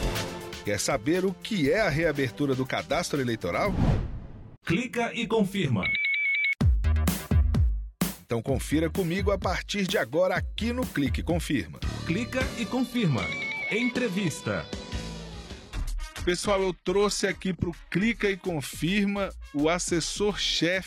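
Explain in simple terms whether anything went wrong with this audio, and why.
Something did go wrong, from 12.4 to 18.4 seconds. This is an adaptive stream at a lower bitrate. The connection likely slowed, so the player switched to a much smaller, lower-quality version of the audio. The sound there gets duller, with nothing above about 12.3 kHz. The drop comes suddenly, with no gap or pause. At 18.4 seconds the full quality returns just as abruptly.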